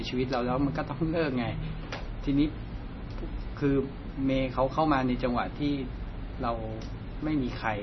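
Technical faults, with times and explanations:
Throughout, MP3 compression: the speech sounds dull and watery, with nothing above 5.9 kHz and a swirling, chirpy texture on s sounds. This is likely a heavily starved MP3 encoder, fitting roughly 24 kbps, cutting the treble and zeroing weak frequency lines frame to frame.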